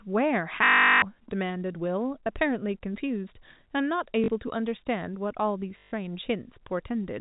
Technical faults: packet loss with last packet repeated

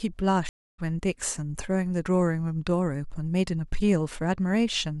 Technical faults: stream reconnect

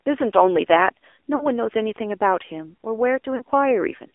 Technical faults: AMR narrowband mobile codec; lost AMR speech frames

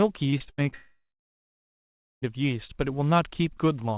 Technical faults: repeated packet loss (robotic sound); long network dropout

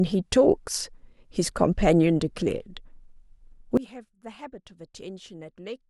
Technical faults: sudden gain jump

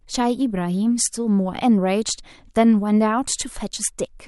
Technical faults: none

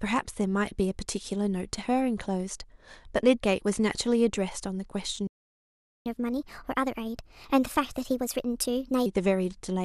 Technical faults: playback stall; catch-up at higher speed

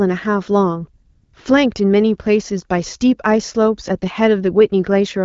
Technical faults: AMR comfort noise

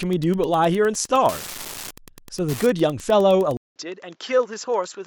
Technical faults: Wi-Fi interference; input switched to a poorer device

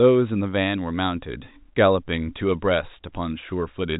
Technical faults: none

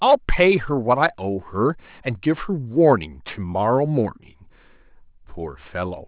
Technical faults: aliasing

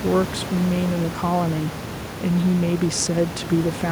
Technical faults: none

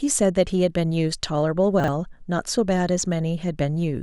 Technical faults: chunks out of order

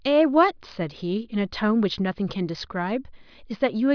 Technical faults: none

